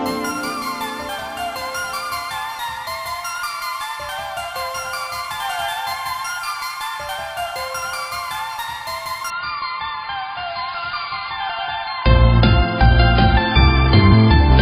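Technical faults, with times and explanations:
9.30 to 14.62 s, adaptive stream at a lower bitrate: the player abruptly switched to a far leaner version of the stream, which fits a drop to about 16 kbit/s AAC. Everything above 5.1 kHz vanishes and coding artefacts thicken, with no gap, until the end.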